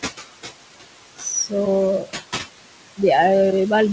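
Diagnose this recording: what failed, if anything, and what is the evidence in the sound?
Noise suppressor artifacts run through the whole clip, at the call-processing stage. The room noise sits about 8 dB below the speech. Between phrases the suppressor pulls it down by about 18 dB. Its frame-by-frame band gains leave a residue that pumps with the speech.

Speech cut by the noise suppressor occurs from 1.16 to 1.26 s, also in call processing. For about a tenth of a second, part of the speech drops by as much as about 21 dB and sounds swallowed. The suppressor mistook quiet speech energy for noise and attenuated it.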